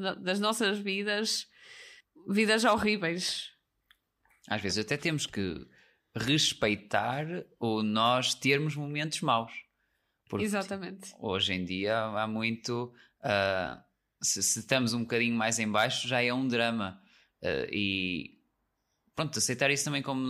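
No technical faults occur at any point in the recording, so there are none to describe in time order.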